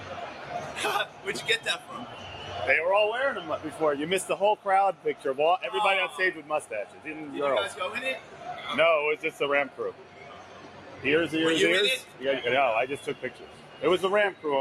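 A speech-tuned noise suppressor sits on the whole clip, so this is a noise suppressor applied to music or sounds. It treats steady, sustained material as noise. The gain it applies keeps moving, with a swing of roughly 10 dB. Onsets mostly slip through. What follows them is pulled down. The result pumps and flutters, and the sound keeps thinning and then recovering.

The worst spots are sound cut by the noise suppressor. It runs from 0.0 to 2.51 s, with a dip of about 7 dB. Short drops follow at 3.65 to 3.8 s, about 6 dB, and 4.56 to 5.25 s, about 7 dB. Then come 6.42 to 7.06 s, about 7 dB, and 8.19 to 8.45 s, about 6 dB. A long stretch runs from 9.32 to 11.02 s, about 7 dB. Then 12.03 to 12.21 s, about 6 dB, and 13.15 to 14.44 s, about 7 dB. In each, held tone sinks or tails are clipped short.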